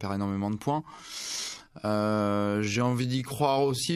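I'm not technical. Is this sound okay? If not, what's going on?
No. There's a time-stretched section from 0.8 s to the end: the speech suddenly slows to about 0.63 times its normal pace while the pitch stays the same, so it drags. Software likely stretched this part by repeating tiny slices of sound.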